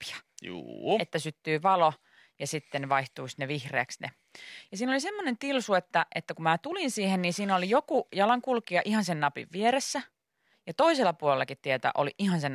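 Nothing technically wrong turns up anywhere in this speech recording, so there's no fault to point to and no time or cause to give.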